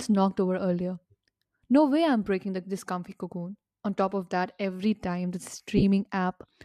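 Around 2.24 to 2.27 s there's a 22.5 ms gap of lost LE Audio frames, likely from the LC3 link. The decoder repeats the last spectrum with scrambled phase, so the speech smears briefly into noise. Between 5.77 and 5.84 s it happens again as 37.5 ms of brief dropouts scattered over 60 ms.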